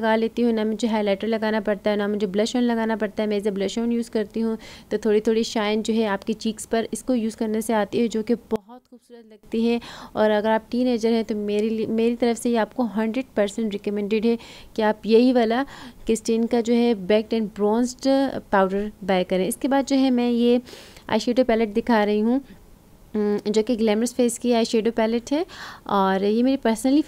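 From 8.56 to 9.43 s the sound drops sharply, by about 23 dB. Much of the centre seems to vanish. What remains is faint and weak. The likely cause is one channel inverted. With one side's polarity reversed, everything common to both channels cancels when they are summed to mono. Only the small difference between them survives. At 9.43 s the full sound returns.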